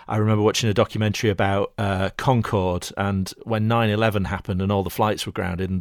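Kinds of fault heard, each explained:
No faults can be heard anywhere in this recording.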